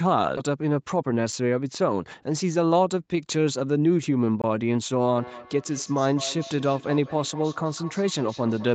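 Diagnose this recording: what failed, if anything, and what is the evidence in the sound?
At the network and jitter buffer stage, a skip ahead dropped roughly 0.7 s of queued speech. Playback jumps forward at 0.37–0.39 s, splicing the two sides almost directly.

The jitter buffer held too much audio and ran a speed-up, trimming pitch periods from 0.97 to 1.47 s. Speech runs at 110% speed, hurried but unchanged in pitch.

At the driver or buffer stage, output blocks went unfilled and became blocks of digital silence. There is a tick at 1.32 s, which fits a 256-sample block, and a 21 ms hole at 4.42–4.44 s, which fits 1024 samples.

Two devices in one room formed a feedback echo loop. From 5.15 s onward, speech returns roughly every 200 ms at up to about −16 dB, each repeat thinner and more ringing.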